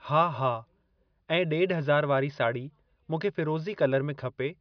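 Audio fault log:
Nothing stood out on listening to this speech recording.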